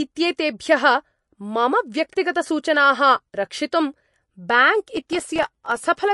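Likely MP3 compression, at a rate that fits about 48 kbps, strips the speech of everything above 11.3 kHz, leaving it dull, watery and swirly throughout. From 4.97 to 5.85 s, processor overload crackle: dozens of tiny buffers, each a millisecond or two, miss their deadlines and drop to silence, tearing the sound into gritty crackle.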